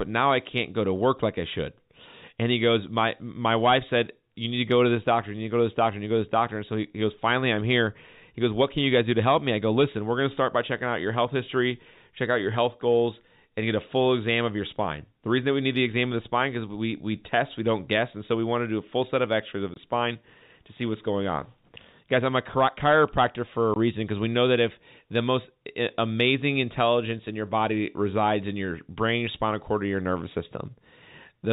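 Speech at telephone bandwidth, with nothing above 4 kHz, consistent with G.711 coding, broken twice by packet loss filled with silence. At 19.74 to 19.76 s, between "of the" and "spine to see what's", and again at 23.74 to 23.76 s, between "a chiropractor for a" and "reason because we know", the audio drops to dead silence for 20 ms, which fits a single lost 20 ms packet each time. The receiver played silence instead of concealing the gap, so the sound cuts off and restarts abruptly.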